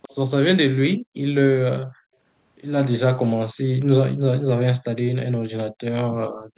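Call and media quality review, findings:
Echo leak, 0.02 to 0.15 s: faint delayed copy of the speech, about 20 dB below the direct signal and trailing it by 267 ms. Likely cause is residual echo that a far-end loudspeaker echo canceller did not fully suppress, returned through the microphone.

Background gated by the echo canceller, at 0.98 to 1.17 s, 1.87 to 2.16 s and 6.33 to 6.53 s: room tone drops out by up to about 40 dB for a fifth to a third of a second, then returns. The canceller's suppressor clamped the microphone during far-end playback.

The audio is band-limited to 4 kHz, which fits a 64 kbps G.711 mu-law call path.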